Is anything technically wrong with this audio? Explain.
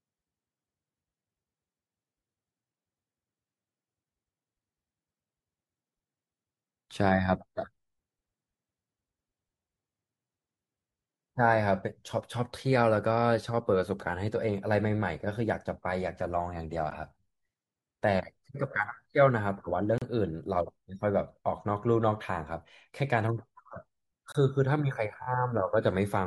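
Yes, there are two kinds of problem in this speech clip.

Blocks of digital silence: at 16.90 s, 19.98–20.02 s and 24.32–24.35 s the audio drops to silence for about 12, 35 and 23 ms. That's likely the output buffer not getting filled in time, and the lengths fit 512- and 1024-sample buffers. You hear a tick or a short hole.

Repeated frames: from 25.22 to 25.26 s a single 21.3 ms chunk of compressed audio gets played two extra times, adding 42.7 ms. The decoder is just replaying the same frame, so it comes across as a quick stutter.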